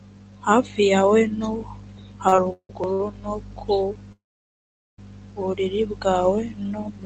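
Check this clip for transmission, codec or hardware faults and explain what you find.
The speech has two network timing faults, both from a call path using Opus, with content above about 8 kHz cut off.

Repeated stalls (stutter), 2.28 to 3.00 s: packets arrived late, so the jitter buffer emptied four times. Each time the receiver stretched the last sound until data returned, filling 279 ms in total, with the longest gap 164 ms. The speech drags and stutters, and nothing is missing.

Call audio freeze, 4.12 to 4.99 s: the speech briefly extends into a fading buzz or hiss, then falls silent for about 790 ms before resuming where it stopped. This 857 ms gap was likely caused by packets held up in transit, which drained the jitter buffer.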